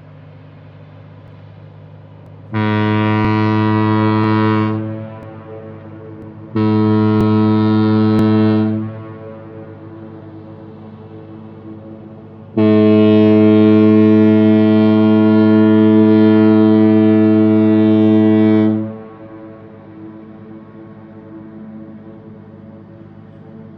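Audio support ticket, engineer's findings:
Overlap between stream segments. Clicks or tiny skips at 1.28, 2.26, 3.25, 4.24, 5.23, 6.22, 7.21 and 8.19 s. Roughly one per second, matching 1-second segments. Segment timestamps overlap, so the player trims real sound at each boundary. The waveform jumps there.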